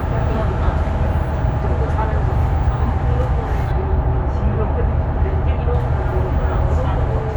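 From 3.72 s to 5.75 s, de-emphasis has been applied wrongly. A treble-cut filter meant to reverse pre-emphasis has acted on audio that never needed it, or has acted twice. The high end rolls off in a smooth, steady slope. At 10 kHz the level sits about 14 dB below the level at 1 kHz. The sound turns dull and muffled, as if heard through cloth. The treble cut ends at 5.75 s.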